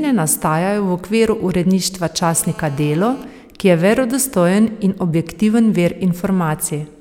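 Just after "okviru uredništva", from 2.23 to 3.24 s, a steady GSM phone buzz appears about 22 dB below the speech: the audio circuit rectifies a nearby handset's 217 Hz transmit bursts. Unlike mains hum, it is raspier, rich in harmonics, and does not sit at 50 or 60 Hz.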